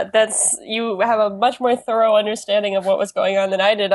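No technical faults can be heard anywhere in the speech recording, and the signal stays intact and continuous throughout.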